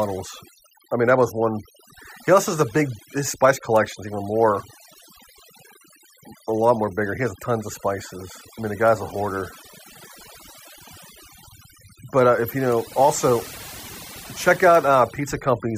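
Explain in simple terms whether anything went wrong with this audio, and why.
Overdone noise removal affects the speech from start to finish. A noise reducer set too aggressively has shut off frequency bands it mistook for noise, taking the softer parts of the voice with them, so the background in the pauses drops and breaks up into twinkling, warbling specks.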